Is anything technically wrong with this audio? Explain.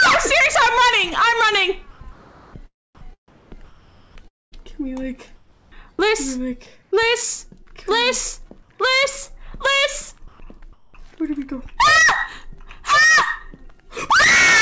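Yes. Several faults come from the call's transmission, and the sound is limited to nothing above 8 kHz, which fits a wideband G.722 call codec.

From 1.91 to 2.54 s and from 3.05 to 4.55 s, the sound is chopped by the voice detector. Parts of the sound drop out and give way to flat synthetic noise, about half a second in the first stretch and about a second in the second. The likely cause is a sender detector switching transmission off and on. The result is choppy.

Comfort noise replaces the background from 5.36 to 5.72 s, from 6.83 to 6.92 s and from 10.28 to 10.94 s. In these pauses the real background gives way to a steady, featureless hiss. The likely cause is discontinuous transmission, with the receiver generating noise shaped roughly like the background. At 5.36 s the fill is about 4 dB quieter. At 6.83 s it is only about 1 dB lower.

At 7.64 s there is a short concealed packet loss. 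About 30 ms of audio never arrived in time. The receiver extended the preceding sound to cover the gap, then blended back into the real signal. This leaves a brief smear in the sound.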